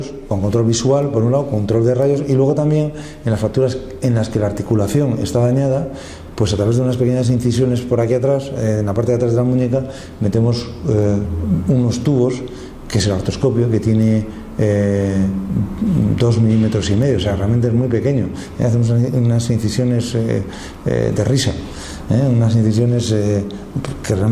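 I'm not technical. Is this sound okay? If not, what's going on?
Yes, it's fine; nothing here sounds wrong.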